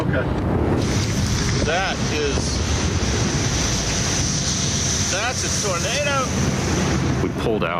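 Gain pumping runs throughout. The level ducks around 10 dB under loud moments, then climbs back. Likely cause: input gain set too high, with a fast limiter clamping down.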